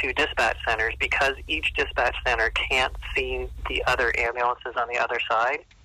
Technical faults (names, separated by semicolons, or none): input switched to a poorer device